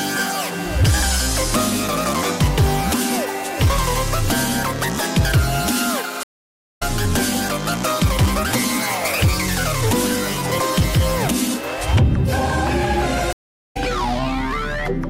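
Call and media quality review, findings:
Stream reconnect, 6.23–6.83 s and 13.33–13.77 s: dropouts of 0.54 s and 0.39 s. Audio resumes roughly 0.4 s and 0.3 s further on. Connection dropped, player restarted decoder mid-stream. Waveform shows flat silent gaps, and the spectrogram shows blank columns with content jumping ahead.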